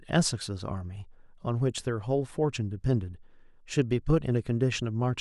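No technical faults can be heard anywhere in the speech recording. There is nothing in it to timestamp or to trace back to a failure in the audio chain.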